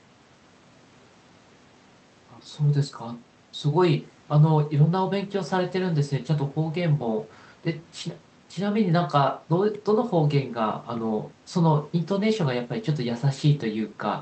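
Nothing stood out on listening to this speech recording.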